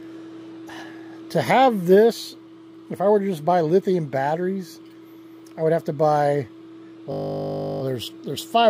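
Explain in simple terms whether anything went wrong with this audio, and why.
Something did go wrong near the end: from 7.12 to 7.82 s there's a system hang loop. The computer briefly froze while the sound hardware kept replaying the same 20 ms scrap over and over, which comes out as a steady 50 Hz buzz.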